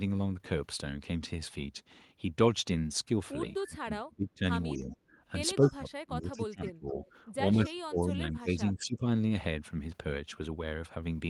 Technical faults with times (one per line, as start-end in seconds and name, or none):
3.58-4.43 speech suppressed in double talk
4.73-4.95 speech suppressed in double talk
5.60-7.04 speech suppressed in double talk
5.68-5.72 echo leak
6.66-6.72 echo leak
7.04-7.11 echo leak
7.54-9.03 speech suppressed in double talk
7.66-7.71 echo leak